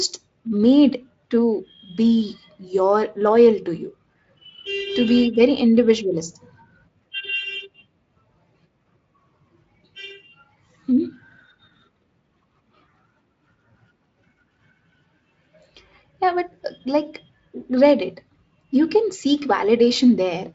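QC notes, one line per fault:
Nothing to flag on this one; the speech comes through a Speex link at what sounds like a fairly generous quality setting.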